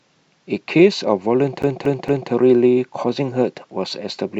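A scratch on the disc kicks the laser back one track on every turn, so from 1.62 to 2.31 s the CD is stuck on one turn: the same 230 ms of speech plays three times, each jump marked by a brief mute, producing a fast, even stutter.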